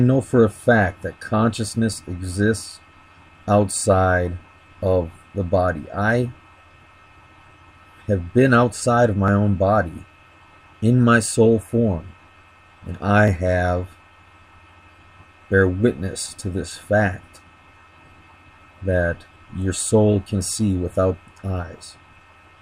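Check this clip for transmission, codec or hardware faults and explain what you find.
One hardware-related fault is present: periodic USB or driver dropouts between 9.28 s and 14.28 s. Roughly seven times in that span, at a steady interval of 1.0 s, a brief slice of audio, around a millisecond, goes missing and the stream jumps straight ahead without any silence fill. The even spacing points to a background task stalling the USB bus or audio driver on a fixed schedule. Each skip leaves a small tick wherever signal is present.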